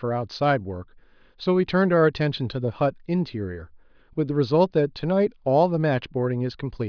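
No technical faults can be heard anywhere in the recording; the speech signal stays continuous and stable throughout.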